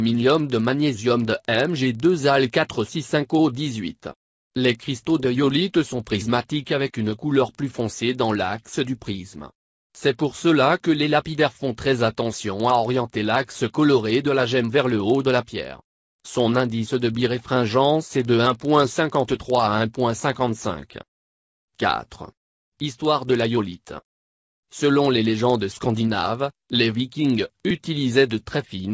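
There's a steady tick running through the whole clip at 20 Hz, only when there's signal. That's a resampler restarted on every block: each 50 ms chunk gets converted on its own, likely a 44.1 kHz to 16 kHz conversion, leaving a small error at every block edge.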